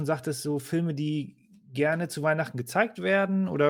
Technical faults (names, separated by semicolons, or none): none